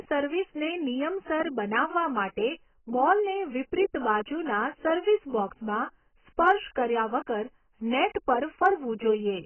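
Throughout the speech, nothing sits above 3.1 kHz, which on a spectrogram shows as a hard flat ceiling with patchy holes below it. The sound is dull, smeared and warbly, with fizzy sibilants. This is likely heavy AAC compression, fitting AAC-LC at around 12 kbps.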